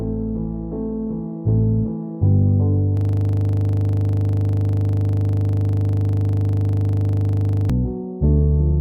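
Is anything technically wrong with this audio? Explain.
Yes. From 2.97 s to 7.70 s there is a system hang loop. The machine or its audio driver stalled while the sound hardware kept replaying the same 40 ms stretch of its ring buffer, which points to a buffer of about that length. That one fragment repeats exactly, more than a hundred times, at 25 Hz, so the audio freezes into a periodic stutter at that rate. A dropout or random crackle would be irregular; here every cycle is identical and evenly spaced.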